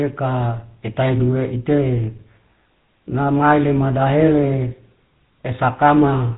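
Buzzy, gravelly roughness runs through the whole speech clip, with nothing audible above 4 kHz. That is the GSM full-rate codec, which fits its 13 kbps rate. It rebuilds the voice from a vocal-tract model driven by coarse, regularly spaced pulses, so the damage is plainly audible.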